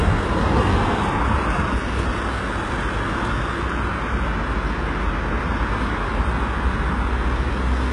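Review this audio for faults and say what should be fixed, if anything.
HE-AAC compression, throughout: the treble sounds gritty and metallic, with nothing above 11.3 kHz, likely because a heavy low-bitrate encode, around 12 kbps, rebuilt the upper bands by copying lower ones upward.

CD skip at 3.62 s: a tick and a mute of a few milliseconds, after which playback resumes from a different point because the laser jumped across the disc's spiral.

To prevent both, rip the disc with an error-checking ripper on a stable drive, and encode at a much higher bitrate, or losslessly, so the treble is kept rather than reconstructed.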